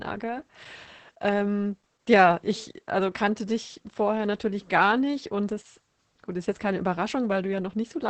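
From start to finish, the speech carries Opus voice compression damage. Nothing sounds above about 8.6 kHz, so the top is cut off and the voice is muffled. That is the wideband limit the coder falls back to when bits are scarce. The SILK coder models speech as a filtered excitation signal, and here the excitation is coded coarsely. The result is heavy hoarseness and a faintly robotic edge, which fits a bitrate around 10 kbps.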